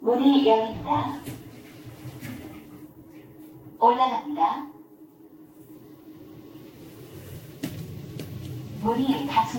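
Generation loss runs through the whole recording. The sound is swirly and smeared, with a hollow, watery character. Transients lose their edges and attacks blur. Nothing remains above about 16.6 kHz. The damage is heavier than a single lossy pass would leave. The likely cause is repeated Vorbis encoding, around ten passes at a rate that points to roughly 60 kbit/s. Each pass quantised on a shifted frame grid. Noise and spectral holes built up with every generation.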